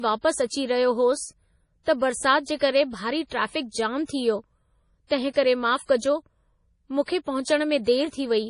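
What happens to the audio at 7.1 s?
At 7.1 s the speech sounds watery and swirly, with nothing above 10.6 kHz. This is likely heavy MP3 compression, present throughout, at a level that fits about 32 kbps. Starved of bits, the encoder drops weak frequency lines, which flicker from frame to frame.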